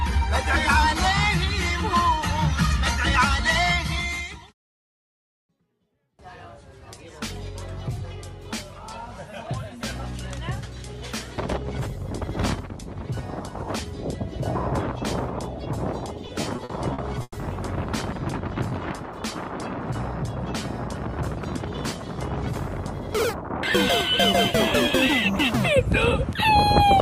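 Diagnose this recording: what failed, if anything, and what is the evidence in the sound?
The network stage failed: packets arrived late or slower than playback consumed them, so the receiver's jitter buffer repeatedly ran dry, producing repeated stalls (stutter). Between 16.27 and 17.36 s the audio halts eight times, with each gap filled by continuing the last sound. About 280 ms is concealed in total, roughly a quarter of that span. The longest hold is 110 ms. Nothing is lost outright, but the sound drags and stutters through that stretch.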